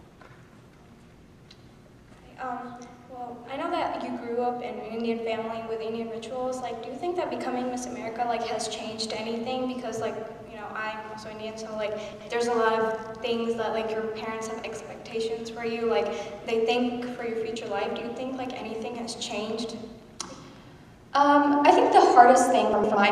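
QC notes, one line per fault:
12.13 to 12.29 s and 22.73 to 22.95 s: frames out of order. Each time, two neighbouring blocks of 78.4 ms and then 104.5 ms, which fits runs of three and four frames, were decoded in swapped order. Each stretch plays with its halves exchanged, heard as a garbled flutter, with no time lost.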